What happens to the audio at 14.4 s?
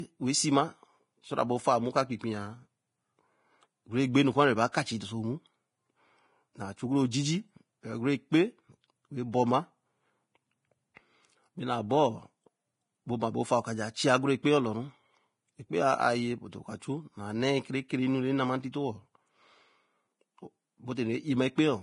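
Pre-echo sits at 14.43 to 14.45 s. Just before a sharp onset in the speech, a short burst of hiss runs for about 21 ms. A transform codec spreads the quantisation noise of each block evenly across it. Because this attack lands late in its block, noise scaled for the loud onset also fills the quiet gap ahead of it. The hiss arrives early and the attack sounds softened and smeared.

Behind that moment, and through the whole clip, the speech carries a heavy grainy hiss. Nothing is present above 10.5 kHz, and tones sound roughened. The likely cause is strong Vorbis compression, at a rate that fits roughly 29 kbps. At that level the encoder lowers its cut-off and quantises the upper residue so coarsely that fine treble detail is replaced by noise of similar energy, producing the hissy, blurred texture.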